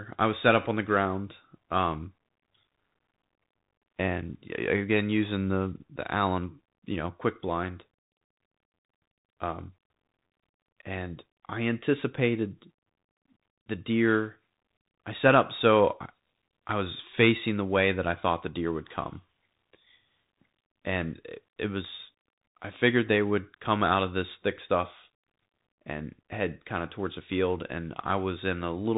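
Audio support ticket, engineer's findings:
Bluetooth CVSD headset codec throughout, damage plainly audible, probable headset link. One-bit delta coding, consistent with a 64 kbps CVSD link, cuts everything above 4 kHz. Step size lags loud high speech, so sibilants turn scratchy, with granular hiss underneath.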